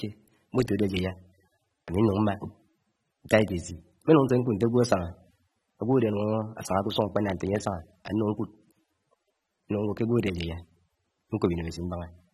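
From start to finish the speech carries plainly audible coding damage, most likely from AAC compression at a low bitrate, with the sound pointing to somewhere near 27 kb/s. Nothing survives above 13.8 kHz, so the top end is cut off and the sound turns dull. Starved of bits, the encoder quantises the spectrum coarsely and leaves gaps between bands, which smears transients and gives sibilants and sustained vowels a warbling, fizzy texture.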